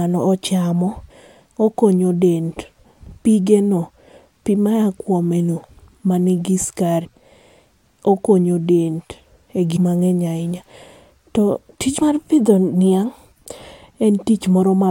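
At 1.09, 2.84, 7.04–7.06, 9.75–9.77 and 12.01 s the speech lurches forward, with a short smeared blip rather than a sharp click at each join. About a tenth of a second of speech vanishes each time, closer to 150 ms at 9.75 s and only about 50 ms at 12.01 s. These are compressed frames skipped: whole frames of 23.2 ms were never decoded, so playback jumps by several frames. Overlap between neighbouring frames softens each seam.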